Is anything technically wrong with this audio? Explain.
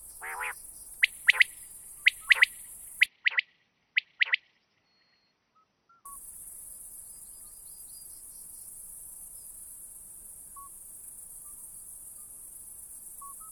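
Yes. From 3.06 to 6.06 s the sound abruptly turns duller and narrower, with nothing above 6 kHz, then clears again. The likely cause is an input switched to a poorer device partway through, a different microphone or headset path with a narrower band and its own coloration. What separates this from a simple low-pass filter is the faint new background noise, roughly 55 dB below the signal, arriving and leaving with the change. There is no gap at either switch and the level stays about the same.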